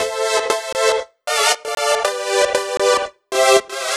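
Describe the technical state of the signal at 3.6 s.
At 3.6 s the signal is intact, with no audible fault at that moment.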